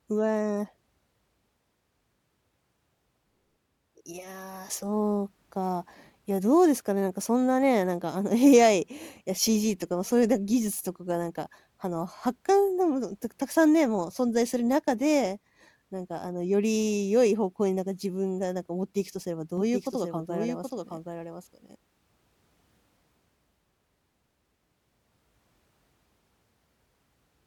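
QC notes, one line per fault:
19.6–21.8 s doubled audio track: a second full-band copy, roughly 5 dB down, trails about 0.7 s behind, likely from a slower capture path, starting and stopping abruptly.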